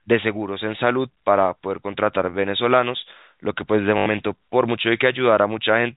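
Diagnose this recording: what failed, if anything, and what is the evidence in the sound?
What failed is on the network side. At 3.98 to 4.06 s there's a short robotic stutter, about 80 ms long, where the speech sounds stuck on one fragment. That's packet loss with the last packet repeated: the receiver kept replaying the final good chunk until fresh data showed up. The run buzzes at a steady rate. It fits four lost 20 ms packets and a 50 Hz buzz, sitting inside the band-limited G.711 telephone sound.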